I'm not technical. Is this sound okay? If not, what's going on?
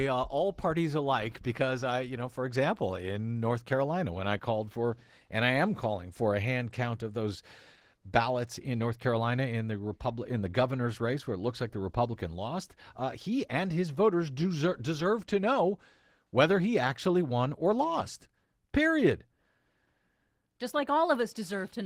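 No. Opus voice compression runs through the whole speech clip, start to finish. To save space, the speech is squeezed hard: the lower range is rebuilt from a rough voice model and the highs coded separately, so the speech sounds noticeably rough and artificial.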